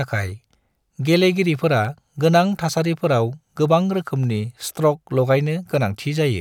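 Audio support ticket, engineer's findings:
Single sharp click at 1.85 s in the speech. Likely cause: dropped samples, with a fraction of a millisecond missing from the stream. The waveform jumps to a later value. Too brief to remove sound, so it is heard only as the click, a thin vertical line across the spectrum.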